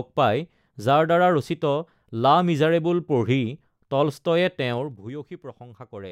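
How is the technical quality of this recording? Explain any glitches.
One glitch stands out in this speech recording: zipper noise from 4.71 to 5.11 s. The level drops by around 15 dB in unsmoothed 2 dB steps, about twenty a second, and each jump leaves a tiny click. This drop audibly ticks as it falls.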